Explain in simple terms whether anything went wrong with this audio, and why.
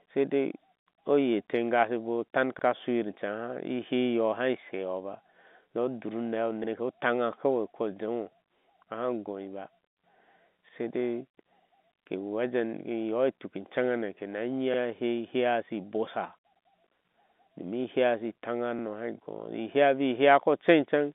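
At 2.59 s, just before "a shuyir", overlapping chunks cause a brief stutter: two chunks overlap, so about 50 ms of the telephone-band speech plays twice.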